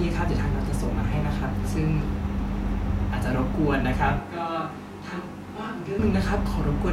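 From 4.19 s to 5.99 s, the recording most likely stops using the close microphone and falls back to a distant microphone further from the talker. The speech turns abruptly roomy and hollow, loses its low-end body, and drops to roughly 10 dB quieter, while background room noise rises to sit only about 25 dB below the speech. At 5.99 s the close, full sound returns just as suddenly as it left.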